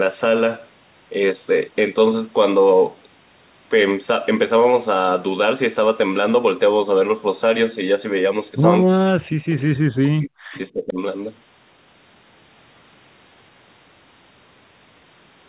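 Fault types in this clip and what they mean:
Speech suppressed in double talk: the speech sinks sharply, by up to about 40 dB, likely because the echo canceller turned everything down while both sides talked.
Echo leak: a faint scrap of the speech returns 326 ms later, about 25 dB down, likely loudspeaker echo that got past the canceller. It adds a delayed copy rather than removing sound.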